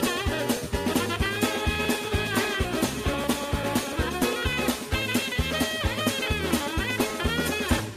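A steady run of periodic USB or driver dropouts goes through the whole clip, from about 0.07 s to 7.89 s, roughly every 0.1 s, so about ten small clicks a second, seventy or so in all. Each one skips around a millisecond of audio outright rather than filling the gap with silence, so you hear a regular tick wherever there's signal. That evenly spaced pattern points to something in the background stalling the bus or driver on a fixed schedule.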